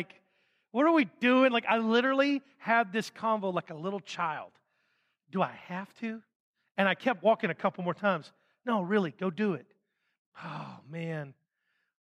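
From 7.46 to 7.99 s the speech slows by 5.3% and drops about 94 cents, nearly a semitone, then snaps back: a drift correction step, likely a clock-matching resampler. Unlike wow, the pitch holds steady, then returns abruptly.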